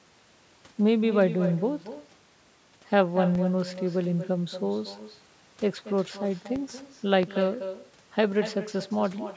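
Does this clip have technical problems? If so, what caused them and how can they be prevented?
Yes. All through the speech there's echo with no canceller: a thinner copy of the voice, about 12 dB down, trails it by roughly a fifth of a second because the far end's speaker feeds its mic. Turning on echo cancellation at that end, or having them use a headset, stops it.

There are DC steps at 3.35 s and 6.56 s, each a low thump as the waveform's zero line jumps and then drains away through a very low high-pass around 5 Hz. A converter or input stage with a stable offset, or a DC-blocking filter early in the chain, prevents those.

At 7.23 to 7.26 s there's a single loud pop, roughly 10 dB above the speech, most likely a connector, switch or static discharge putting a voltage spike into the line. Secure cables and avoid switching or touching gear during the call to prevent it.

The call's mic processing, which passes nothing above 8 kHz, is working as it should.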